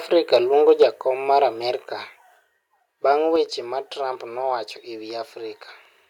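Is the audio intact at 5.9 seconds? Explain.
Yes, the speech at 5.9 seconds is intact, with no audible fault at that moment.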